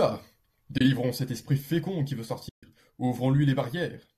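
At 0.78 s, just before "cet esprit fécond qui", the sound drops out for about 30 ms. This is AAC frame loss with muting. The decoder had no data for that stretch and filled it with silence, which fits roughly three lost 10 ms frames. Overlapping windows fade the sound out and back in, so the hole has soft edges. At 2.49 s, after "esprit fécond qui veut", a longer muted gap runs to 2.63 s, about 140 ms. The stream here is likely low-delay AAC, with light coding damage.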